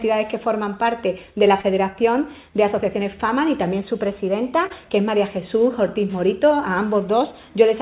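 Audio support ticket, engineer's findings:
Short concealed packet loss, 1.61–1.66 s. About 30 ms of packets late or lost before the decoder; receiver extrapolated the preceding sound for 23 ms, then crossfaded back. Heard as a brief smear.

Short concealed packet loss, 4.66–4.73 s. Same mechanism: roughly 30 ms missing, 34 ms synthesized from the last good audio. Heard as a brief wobble.

Call path band-limited, nothing above 4 kHz, consistent with G.711 mu-law at 64 kbps.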